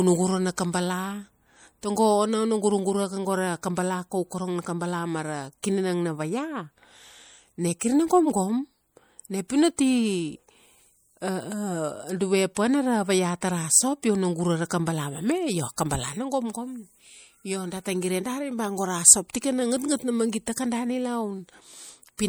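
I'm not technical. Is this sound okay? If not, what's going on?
No. The speech sounds watery and swirly from start to finish, with the s sounds turning metallic. That is likely MP3 compression: the file was squeezed too hard, so quiet details flicker in and out.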